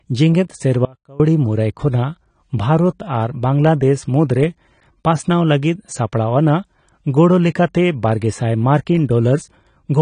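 Speech throughout, with plainly audible AAC compression: nothing above 10 kHz and a dull, smeared texture, likely from AAC-LC at a low bitrate around 32 kbps, unlike a simple filter's clean roll-off. From 0.85 to 1.20 s, about 0.35 s, the sound cuts out abruptly, likely an audio dropout to a faint residue, leaving a trace roughly 25 dB down rather than a natural pause.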